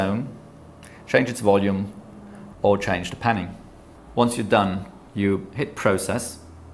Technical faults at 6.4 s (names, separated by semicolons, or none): none